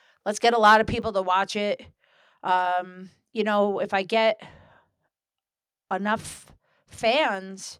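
Microphone overload appears in this speech recording from 0.65 to 0.76 s, right after "let's get a". The loudest syllable takes on a harsh, crackling edge with its peaks flattened, most likely because the input level drove the converter about 3 dB past full scale, squaring off around 7 percent of the samples. A microphone volume step-down follows at 1.02 s, just before "to watch it". Voice and background both fall abruptly by about 5 dB in a single step, likely the call software reacting to that clipped peak by cutting the device's input volume.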